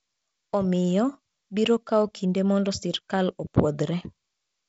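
Nothing's gone wrong in this speech; it's just carried over G.722 wideband telephone coding at 48 kbit/s, so there's a touch of codec texture and the top end stops at about 7.7 kHz, exactly as that kind of line would have it.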